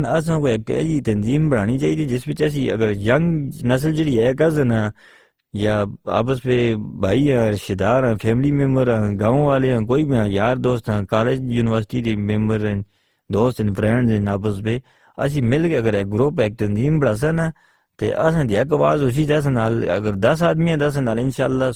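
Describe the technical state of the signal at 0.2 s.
Generation loss is present at 0.2 s and runs through the whole of the speech. The sound is swirly, smeared and hollow, with blurred attacks and nothing above 20.2 kHz. This is likely the result of around seven successive lossy passes, consistent with Opus at roughly 48 kbit/s. Each re-encode quantises again on a shifted frame grid, so the noise and spectral gaps of every pass pile up beyond what a single encode would leave.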